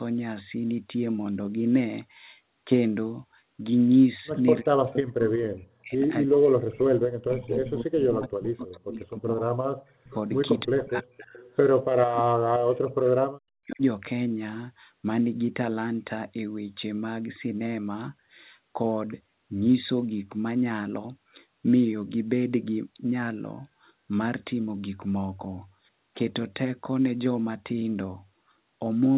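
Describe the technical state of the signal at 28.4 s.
At 28.4 s the speech is intact, with no dropout, distortion or other fault, only the narrow telephone-band sound of a G.711 call, with nothing above 4 kHz.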